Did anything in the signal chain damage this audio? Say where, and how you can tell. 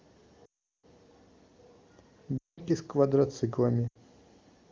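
Yes. Lost AMR speech frames in the network stage: radio errors corrupted frames, so the decoder repeated the last good pitch and vocal tract settings with falling gain. Speech drops to near silence within two frames at 0.45–0.86 s, 2.38–2.61 s and 3.87–3.99 s.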